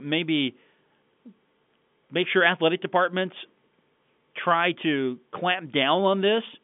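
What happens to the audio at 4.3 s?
Nothing goes wrong at 4.3 s: the speech passes through intact, carried only by the ordinary narrow telephone band of G.711 coding with nothing heard above about 3.7 kHz.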